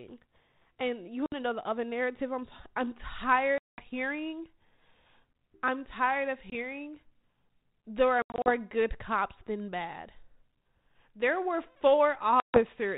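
Packet loss on an ADPCM call, over a G.726 link at 32 kbit/s with light codec damage, cuts hard silent holes at 1.26 s (60 ms, before "to know the other"), 3.58 s (200 ms), 6.5 s (20 ms, after "I'm tired of"), 8.22 s (160 ms in short runs over 240 ms, before "good cops than bad") and 12.4 s (140 ms). Unlike a plain dropout, the decoder's predictor and step size lose track of the sender's, so the speech resumes slightly distorted, settling within tens of milliseconds.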